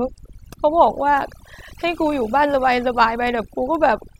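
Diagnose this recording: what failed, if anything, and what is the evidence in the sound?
Overdone noise removal runs throughout this speech clip, a failure at the call-processing stage. The noise suppressor was set too aggressive, pulling frequency bands near its noise estimate down to nothing. The background drops and breaks up into twinkling specks, while quieter parts of the voice are stripped away.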